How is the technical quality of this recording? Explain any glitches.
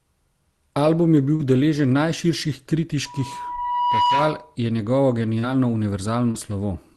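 The speech carries the usual coding noise of a call codec, and it is marred by three brief dropouts and one feedback squeal.

Short concealed packet loss occurs at 1.35–1.42 s, 5.39–5.46 s and 6.31–6.37 s. Each is a brief smear or wobble where about 40 ms of the call arrived too late. The receiver papered over each gap by extending the preceding sound, then blended back into the real audio.

A loudspeaker feedback squeal runs from 3.05 to 4.56 s. It is a single tone at 976 Hz that swells over about a second to roughly 5 dB above the speech. The microphone picked up its own loudspeaker, and the loop gain at that frequency exceeded one.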